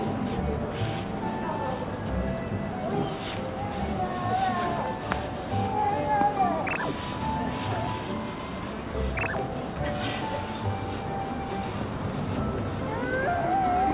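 Nothing wrong to report on this audio: no technical faults are audible anywhere in it.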